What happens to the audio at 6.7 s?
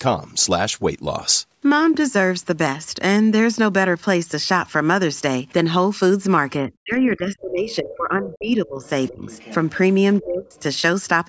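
At 6.7 s the speech is caught in a stretch of speech suppressed in double talk, running from 6.61 to 8.87 s. The level dips, with the deepest drop around 25 dB and roughly two seconds affected in total. The likely cause is an echo canceller that, with both ends talking at once, cannot tell the local talker from loudspeaker echo and attenuates both together.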